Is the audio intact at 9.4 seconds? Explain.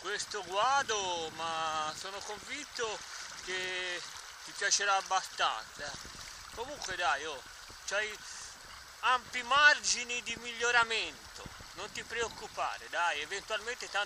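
No. Dropped samples occur at 9.39 s, where a single sharp click breaks the sound, visible as a thin vertical line across the spectrum. The likely cause is a handful of samples, well under a millisecond's worth, going missing from the stream, so the waveform jumps straight from one value to a later one. That gap is far too brief to remove any audible sound, and the abrupt step is all the ear catches.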